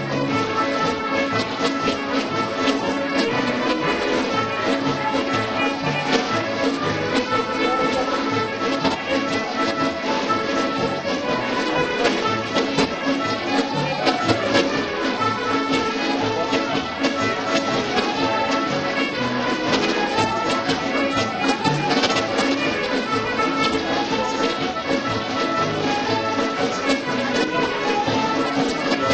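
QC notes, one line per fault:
Throughout: periodic clock jitter. The converter's sampling clock is being nudged back and forth at a steady rate of around 500 Hz, so each component of the sound picks up sidebands roughly 500 Hz above and below it. They are stronger on higher-frequency content, giving a rough, metallic edge that disappears whenever the audio falls silent. On a spectrogram, thin parallel ghost lines track each partial at that spacing. The waveform looks unchanged.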